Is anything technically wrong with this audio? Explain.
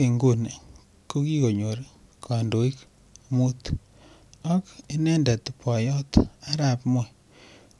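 No, nothing technically wrong here.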